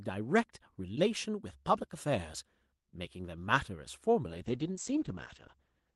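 At 4.29 s a call bitrate drop sets in and runs to the end of the clip, about 1.67 s. The speech arrives over an Opus call path whose top end reaches 12 kHz. Then the bandwidth estimate falls, and the encoder is starved of bits. The sound points to a fall from about 32 kbps to roughly 11 kbps. The high band shrinks to 8 kHz, so the speech turns muffled. Coarser coding adds a rough, watery grain. It never recovers.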